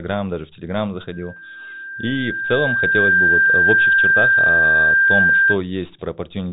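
From 1.12 s a steady whistle at 1.6 kHz rises out of the speech, swelling over about two seconds until it stands roughly 10 dB above the talker and holds there until 5.59 s, all within a telephone band that stops near 3.9 kHz. This is loudspeaker feedback squeal: the microphone was hearing the loudspeaker it drives, and at 1.6 kHz the loop gain exceeded one, so that tone fed on itself until it reached its limit.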